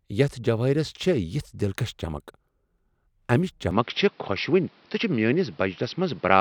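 At 3.71 s the speech suddenly loses its top end, with nothing above 5.8 kHz from there to the end. It switches without a gap or a level jump, and a faint new background sits well under the speech. That's most likely the input switching to a poorer device.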